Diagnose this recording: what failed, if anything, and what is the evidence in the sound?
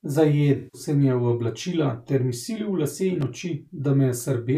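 Codec and network stage: AAC frame loss with concealment from 0.56 to 0.81 s. The speech turns smeared and phasey as the decoder rebuilds missing frames from the last good spectrum. The roughly 171 ms gap fits about eight lost frames.

Analogue wiring stage: loose connector crackle from 3.21 to 3.30 s, an irregular burst of scratchy crackle over the speech. A worn or dirty contact is making and breaking rapidly, chopping the signal and adding pops wherever DC sits on the line.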